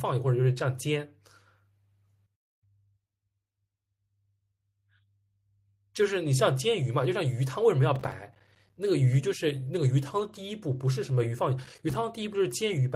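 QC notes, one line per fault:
7.96–8.77 s, processor overload crackle: the processor repeatedly failed to fill its audio buffers in time, around thirty misses, consistent with roughly 5 ms buffers. Each miss dropped in a hard-edged slice of silence, so the speech tears into gritty crackle until the load eases.
10.19–10.37 s, lost packet rebuilt from error correction: separate packets went missing, and the decoder substituted the low-bitrate backup copies carried in the following packets, 100 ms in all, which fits about five packets. There is no gap, but the speech turns briefly rougher and noisier.
11.65–11.95 s, processor overload crackle: a second, shorter overload, about ten missed deadlines at what sounds like a 5 ms buffer size, each leaving a sharp-edged silent hole. The rapid cluster of tiny dropouts sounds like a short burst of crackle over the speech.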